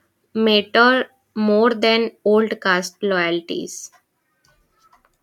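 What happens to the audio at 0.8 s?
Nothing goes wrong at 0.8 s; the speech there plays through intact, with no dropout, click or distortion.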